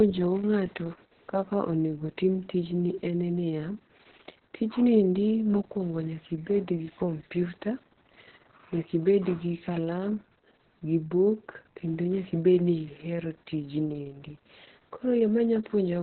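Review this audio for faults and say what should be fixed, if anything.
The speech sounds muffled, hoarse and faintly robotic from start to finish, with nothing above 4.2 kHz. This is heavy Opus voice compression: the coder appears to be running its SILK linear-prediction mode in narrowband, where it models the voice from a coarse excitation and drops the upper band. The damage points to a bitrate of around 6 kbps. To prevent it, encode at a higher bitrate so Opus keeps wideband or fullband audio.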